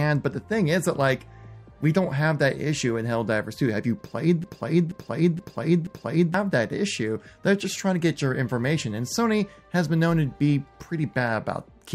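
Something upstream, most likely the player, encoder or stream, stalled at 4.44 s and kept sending the last fragment it held, producing a broken-record loop that runs until 6.34 s. A piece of about 0.48 s of sound repeats exactly, back to back, four times, so the same short stretch cycles with a rigid, mechanical rhythm. Whatever should have played during those two seconds never arrives, and the sound then resumes after the loop.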